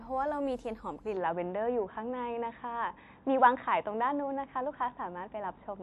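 From 1.17 s the speech suddenly turns dull, losing everything above 3.8 kHz and shifting level by about 5 dB; the input likely switched to a poorer device.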